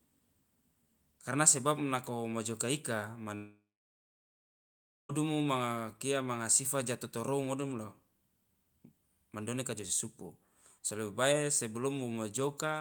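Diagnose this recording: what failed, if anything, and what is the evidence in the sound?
After "sebab nako mojoka ika", at 3.35 s the speech dissolves into a fading buzz, then about 1.5 s of near silence, resuming at 5.11 s with 1.74 s of speech gone. This is likely a long network dropout: packets stopped arriving, and concealment stretched the last sound before giving out.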